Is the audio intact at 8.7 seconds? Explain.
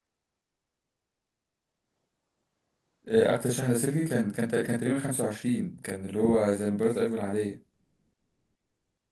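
No. From 7.73 s to the end at 9.11 s, the sender likely stopped transmitting during the pause, as Opus discontinuous transmission does. The receiver filled the gap with comfort noise in place of the background: the real ambience becomes a steady, featureless hiss about 9 dB different in level.

Throughout the clip, including this moment, a channel delay of 40 ms causes doubling. One channel arrives late, and when the two are summed to mono, the late copy is heard at equal level as a close slap or thickened doubling of the speech.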